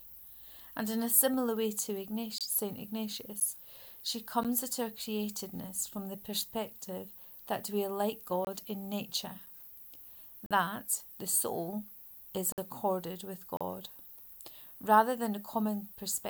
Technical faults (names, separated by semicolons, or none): gap between stream segments